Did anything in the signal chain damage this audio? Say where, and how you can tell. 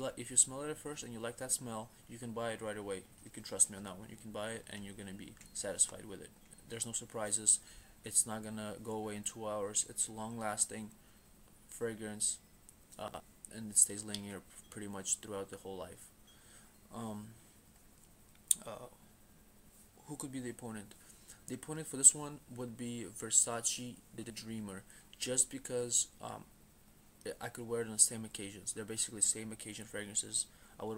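Yes, chunks out of order at the buffer stage: at 13.08 s and 24.18 s, two 60 ms blocks swap places, giving a brief jumbled blip with three hard joins.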